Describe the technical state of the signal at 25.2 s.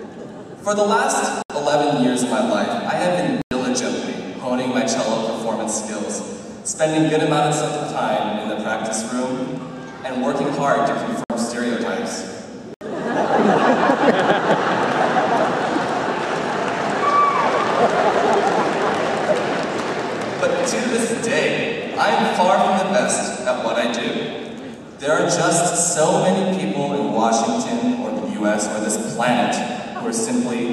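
At 25.2 s the signal is intact, with no dropout, distortion, glitch or other fault to be heard at that point.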